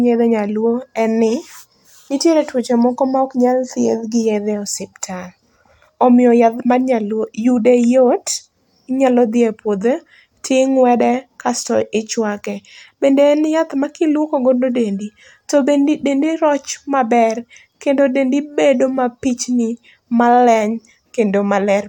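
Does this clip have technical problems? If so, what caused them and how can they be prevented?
No, the speech signal has no technical faults, so there is no cause to trace and nothing that needs preventing.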